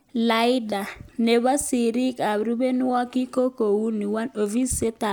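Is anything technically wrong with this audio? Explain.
No, the signal shows no technical faults anywhere in this speech recording.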